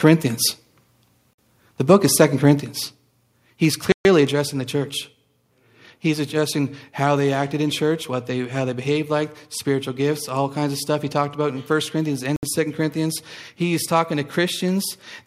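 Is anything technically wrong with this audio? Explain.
Yes, there are three kinds of fault.

Microphone overload, 0.06 to 0.10 s: the input gain was likely set too high, so peaks exceed the converter's limit by about 1 dB, and a small share of samples have their tops flattened into a brief, harsh crackle.

Bluetooth stall at 1.33 s, 3.92 s and 12.36 s: interference likely delayed packets until the headphone buffer emptied, so the sound drops to silence for 51 ms, 130 ms and 67 ms, then resumes.

Microphone volume stepped down at 2.60 s and again at 4.32 s, just before "the church": call software likely cut the input gain in a single step, so the sound and background each fall abruptly by about 4 dB.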